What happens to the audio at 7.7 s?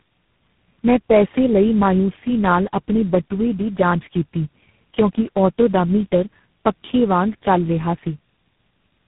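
At 7.7 s, the speech carries tandem speech coding, present across the whole clip. It sounds like about four low-rate speech codecs in a row. Each recodes the previous one's damage. The result is rough, muffled and warbly, with nothing above 3.8 kHz.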